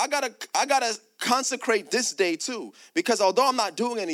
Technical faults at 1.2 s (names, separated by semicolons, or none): none